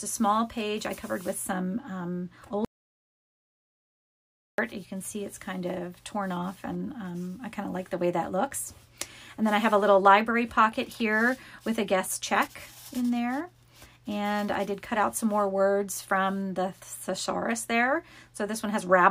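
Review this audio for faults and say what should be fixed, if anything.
Audio dropout to silence from 2.65 s to 4.58 s: the sound cuts off abruptly and returns just as suddenly, leaving a gap of about 1.94 s. The gap is dead silence, with no room tone or background, so whatever occurred in that stretch is simply gone. The likely cause is a brief loss of the input, such as a loose cable, a dropped wireless link or an accidental mute, while the recorder kept writing silence. Secure connections, monitor input levels during capture, and run a backup recorder so any lost stretch can be replaced.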